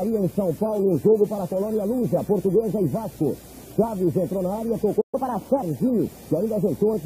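At 5.01 s the player likely ran dry or had its thread blocked, causing a playback stall. The output falls silent mid-flow until 5.15 s, then the sound resumes, leaving a brief, clearly audible hole in the sound.

From 5.15 s to 5.63 s the player works off the delay it built up by resampling its backlog at 1.25 times normal speed. This catch-up at higher speed makes the sound audibly hurried and raises its pitch by roughly four semitones. Both return to normal at 5.63 s.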